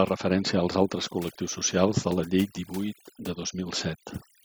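A short speech recording suffers from overdone noise removal across its whole length. The noise reduction was set too aggressively, so individual frequency bands that sit close to the estimated noise level are pulled down hard or gated out entirely, taking the quieter components of the voice with them. The background in the gaps drops away, broken by twinkling, chirpy specks where stray bands flicker on and off.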